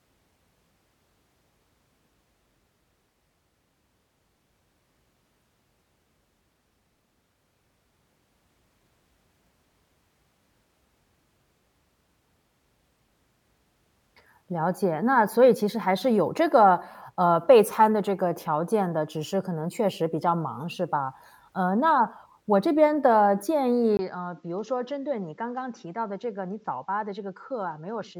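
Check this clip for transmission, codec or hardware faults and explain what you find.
One fault is present. From 23.97 s to the end, the input likely switched to a poorer device. After a 20 ms gap, the speech loses everything above 7.7 kHz, drops about 5 dB, and carries new background noise roughly 45 dB down.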